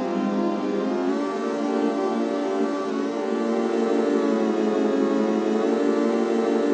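No technical faults can be heard in this audio.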